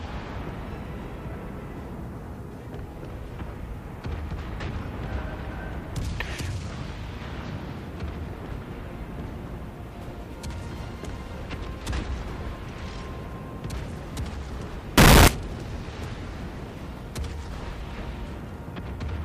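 From 14.98 to 15.28 s, 8-bit samples were likely read with signed and unsigned mixed up, flipping the top bit so every zero crossing leaps across the full range. For that 0.3 s the sound becomes a blast of very loud, harsh distortion, quiet moments included.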